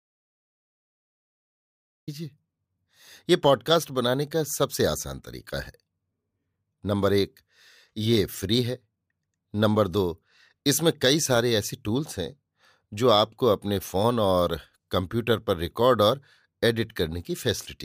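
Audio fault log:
0.00–2.08 s, audio dropout to silence: the speech is already absent as the clip opens and enters mid-flow at 2.08 s. The gap is silent with no room tone, unlike a gate or fade, which likely points to lost input while the recorder kept writing silence.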